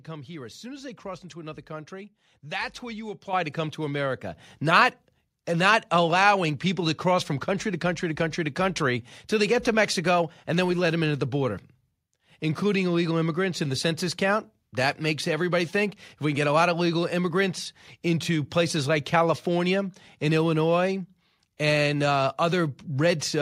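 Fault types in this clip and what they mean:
Microphone volume stepped up: the call software judged the input too quiet and raised the device gain in one jump. Voice and background get louder together. At 3.33 s, after "country that's where you", the level rises about 8 dB. At 4.35 s, before "not and not allowing", it rises about 4 dB more.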